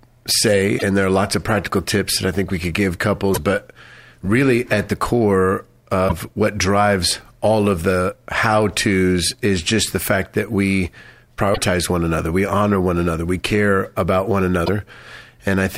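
Damaged data in a compressed stream breaks the speech five times: 0.75 to 0.83 s, 3.31 s after "think we could give", 6.05 s between "really at the core" and "what drives all of", 11.53 s, and 14.62 s after "we care about one". Each time, the decoder loses frame sync on corrupt bytes.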